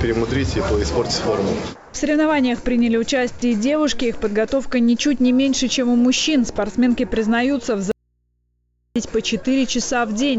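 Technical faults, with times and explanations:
1.76 to 1.94 s, comfort noise in place of the background: For 180 ms the real background, about 24 dB below the loud parts, turns into a flat, featureless hiss about 3 dB quieter. The likely cause is discontinuous transmission, with the receiver synthesising noise during the pause.
6.56 to 6.58 s, sound dropped by the voice detector: A 20 ms slice of the sound vanishes and steady noise takes its place. The sender's detector likely mistook that brief quiet stretch for background and stopped sending. The receiver then filled the hole with generated noise.
7.92 to 8.96 s, audio dropout to a faint residue: The signal cuts out abruptly for about 1.04 s and returns just as suddenly. Only a low mains hum remains, far below the normal level. The likely cause is the wanted signal being lost while the path after it stayed open.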